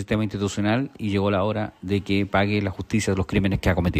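Nothing in the signal points to a technical problem: there are no dropouts, gaps or level jumps, and nothing suggests a fault in the capture or transmission chain.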